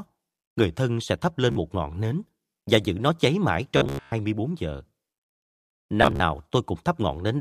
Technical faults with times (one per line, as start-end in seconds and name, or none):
1.52-1.56 Bluetooth stutter
3.77-4.12 Bluetooth stutter
6.03-6.20 Bluetooth stutter